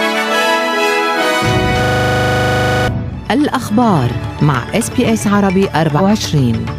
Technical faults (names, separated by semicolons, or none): system hang loop; compressed frames skipped